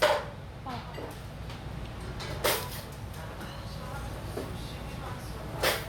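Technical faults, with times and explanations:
No technical fault can be heard in this recording of sounds, and the signal shows no sign of trouble in its path from capture to playback.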